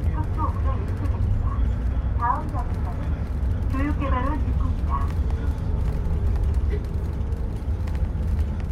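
A brief glitch cuts through the sound at 1.77 s, and a longer one follows from 6.13 to 6.17 s. Both are damaged data in a compressed stream. Part of the encoded file was corrupted at these points, so the decoder misread the affected frames, lost sync and had to hunt for the next valid frame header. That loss of sync while resynchronising is what causes these short glitches.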